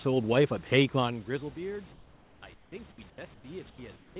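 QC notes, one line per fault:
1.92–2.42, 2.54–2.72, 3.10–3.18, 3.34–3.44, 3.70–3.78 and 3.96–4.16 s: comfort noise in place of the background. In each pause, the room's textured background, sitting about 30 dB under the loudest sound, gives way to a smooth, unchanging hiss about 3 to 7 dB quieter. This likely comes from discontinuous transmission, with the receiver synthesising the filler noise. Unlike a dropout or a noise gate, the pauses never fall to silence; they keep a steady, featureless hiss.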